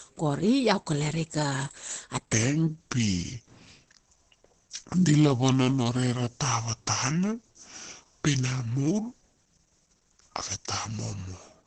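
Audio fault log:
throughout, Opus compression: the speech sounds muffled and hoarse, with heavy codec damage and nothing above about 8.4 kHz. This points to a low bitrate around 12 kbps, likely pushing the encoder into its SILK speech mode, which codes only a wideband range and roughens tone.
2.33–11.67 s, section at the wrong speed: from 2.33 s to the end the speech turns deep and slow, dropping about five semitones. That section plays at 0.732 times its recorded speed, likely from being fitted to the wrong clock, so pitch and pace fall together.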